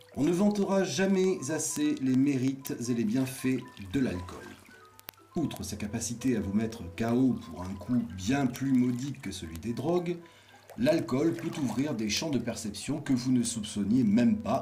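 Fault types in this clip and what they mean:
Word clock ticks: a steady stream of sharp clicks, roughly twenty per second, from 0.10 s to 14.59 s, each a one-sample slip. The receiving device runs on its own unlocked clock, drifting roughly 400 ppm, so samples get dropped or repeated.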